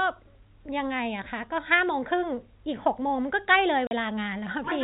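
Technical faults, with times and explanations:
3.87 to 3.91 s, packet loss filled with silence: the speech drops out abruptly for 40 ms, leaving a gap with hard edges. Lost audio packets were replaced by silence, and a 40 ms hole fits four 10 ms packets in this 4 kHz-limited G.711 telephone stream.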